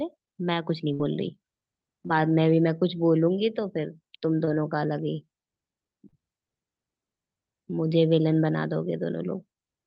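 A burst of packet loss at 0.93 to 1.01 s removes about 60 ms of speech. The receiver stretches the last sound across roughly 56 ms while turning it down, giving a held buzz or fading hiss, and the speech then resumes with that stretch missing.

Short concealed packet loss follows at 2.07 to 2.11 s, 2.79 to 2.83 s, 4.45 to 4.49 s and 6.09 to 6.15 s. Each time 20 to 40 ms failed to arrive in time, and the decoder extrapolated the preceding sound before blending back. The result is a brief smear or wobble, with a short consonant possibly swallowed.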